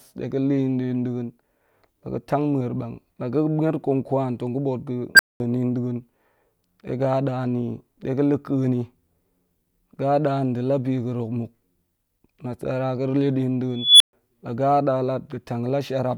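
Speech with an unstable filter. After "tong ga̱ ba̱a̱t pa", a tone near 1.5 kHz swells over 40 ms at 5.15 s, then cuts to 210 ms silence. After "le din", a tone near 3 kHz builds over 233 ms from 13.77 s, then goes silent for 130 ms. Runaway feedback overflows, and sound returns when the filter resets.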